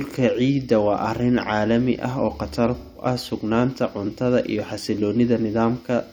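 AAC frame loss with concealment affects this speech clip from 2.78 to 3.05 s, just after "caalami ah oo khatar" and before "ah sugnaanta cuntada iyo". About 0.17 s of coded audio goes missing, which fits roughly four dropped AAC frames. The decoder covers the gap by reusing the last good spectrum with randomised signs or interpolated energy, so the speech there turns into a smeared, noisy, phasey patch instead of clean signal.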